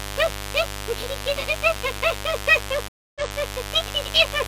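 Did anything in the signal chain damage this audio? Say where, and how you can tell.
Yes. In the analogue wiring, mains buzz runs through the whole clip: a raspy, steady buzz about 10 dB below the signal, built on 50 Hz harmonics extending into the kilohertz range. Sharp switching spikes from a dimmer, rectifier or unshielded cable are getting into the signal.

At the converter, sample clock jitter adds a faint roughness about 40 dB down that grows on loud, bright passages and disappears in quiet ones. An unstable clock, wandering by roughly 0.7 µs, makes each sample land slightly off time.

On the network side, a stream reconnect shows up at 2.88 s. The audio drops out for about 270 ms, then resumes 186 ms earlier than where it broke off, so a short stretch repeats and fades back in by 3.35 s. The player lost the connection, restarted its decoder, and the server resent a burst.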